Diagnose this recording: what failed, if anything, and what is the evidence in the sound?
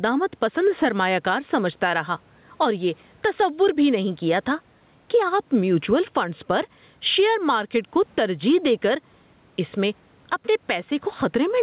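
Gain pumping runs through the whole recording. The low room noise sits about 44 dB below the speech. The swing is around 10 dB. Loud and quiet syllables sit unnaturally close in level, so the speech sounds squashed. The stage is input gain and level control. The likely cause is microphone gain set far too high, with a fast limiter or compressor pulling it down on each loud sound. Above 4 kHz the call path passes nothing.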